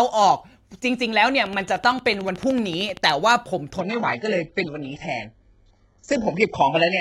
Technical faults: train of clicks; adaptive stream at a lower bitrate

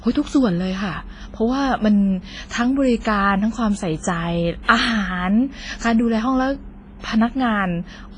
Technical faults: WMA compression; pre-echo

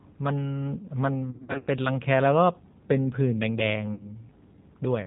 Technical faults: G.729 codec; VoIP packet loss concealed by the speech codec

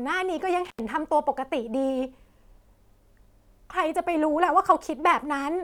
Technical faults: intermittent contact

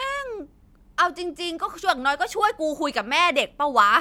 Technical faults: none

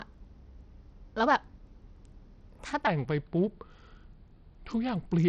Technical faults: Bluetooth SBC compression; section at the wrong speed

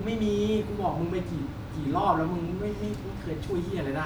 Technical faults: none

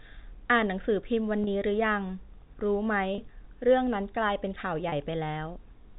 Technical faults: packet loss with pitch repetition

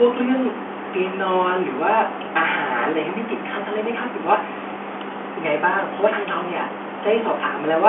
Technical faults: none

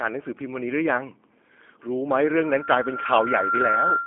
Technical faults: G.729 codec; loudspeaker feedback squeal

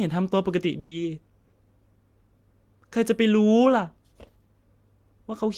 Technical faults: burst of packet loss

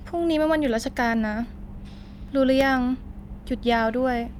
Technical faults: CD scratch ticks

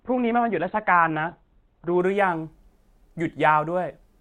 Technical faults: adaptive stream starting at a low bitrate

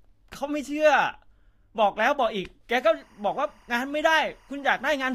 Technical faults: timecode bleed

